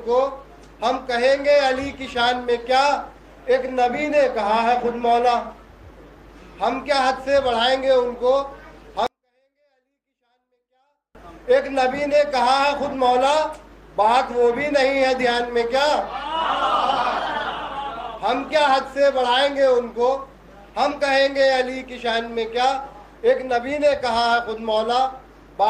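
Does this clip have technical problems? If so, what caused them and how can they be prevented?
Yes. From 9.07 to 11.15 s the sound stays clean but falls away abruptly, dropping by about 48 dB to near silence. It then returns at full level. This is a 24-bit alignment error, too quiet. The samples were packed into the low 24 bits of each 32-bit word. They were then read as full 32-bit integers. Each value came out eight bits, or 256 times, too small. To prevent it, make writer and reader agree on the sample container and alignment.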